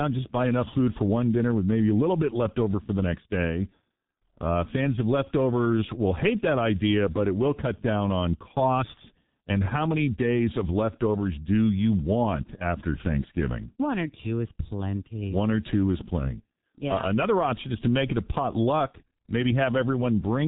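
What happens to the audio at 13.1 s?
At 13.1 s the speech is still passing through the G.723.1 codec that affects the whole clip. The encoder squeezes the signal into 30 ms frames, models the voice coarsely and updates that model slowly, and the heavy damage fits a very low rate of around 6 kbit/s. Nothing above 3.8 kHz survives, so the speech sounds muffled and hoarse, with consonants smeared.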